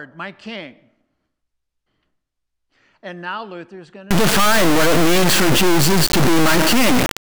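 From 4.11 s, right after "is going to", an integer read as float fault runs to the end. The 32-bit integer samples decoded as 32-bit float become near-zero or huge values, so the output snaps between silence and the clipping limit. It produces a blaring square-wave buzz that drops to silence in quiet gaps.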